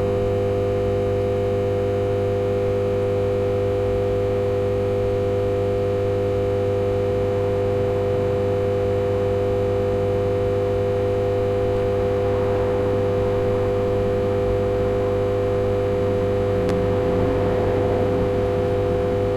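A sound recording with one loud pop at 16.69–16.72 s, standing well above the surrounding level while the sound continues beneath it, unlike a dropout. It is likely a voltage spike from a plug or switch.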